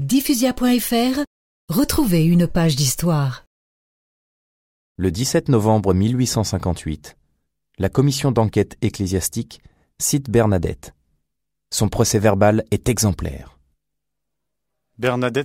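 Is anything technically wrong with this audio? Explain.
No, nothing technically wrong can be heard here.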